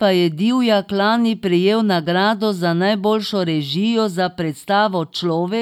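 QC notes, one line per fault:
Nothing stood out on listening to this speech clip.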